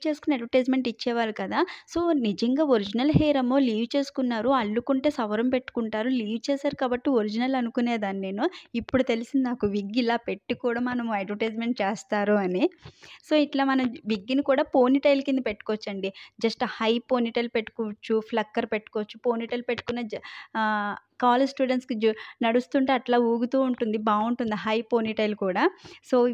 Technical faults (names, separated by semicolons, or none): none